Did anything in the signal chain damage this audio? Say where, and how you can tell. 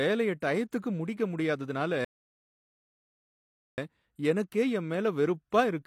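Yes. At the playback stage, the streaming player drained its buffer and had to wait for more downloaded audio, causing a rebuffering stall. Just after "டயத்துக்கு முடிக்க முடியாததுனால", the speech drops to dead silence from 2.05 s to 3.78 s, then picks up at exactly the point where it halted. Nothing is skipped or repeated, which rules out packet loss. The player simply paused, inserting about 1.73 s of silence into the timeline.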